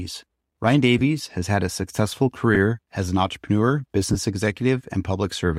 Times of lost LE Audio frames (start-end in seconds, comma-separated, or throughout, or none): 0.99-1.01, 2.55, 4.13-4.16